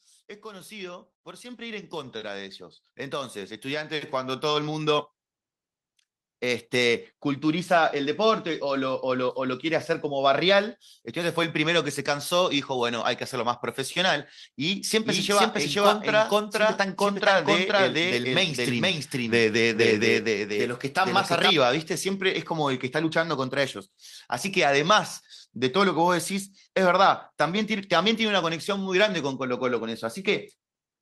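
Automatic gain rising runs from 0.41 to 5.13 s. The gain control judged the input too quiet and raised its gain slowly, about 19 dB in all, so the speech and the background noise behind it swell together across nearly five seconds.

A doubled audio track appears from 14.86 to 21.50 s. A second full-band copy of the speech trails about half a second behind at roughly equal loudness, with no decay or room colour, and cuts in and out abruptly. It was likely captured twice through a slower path.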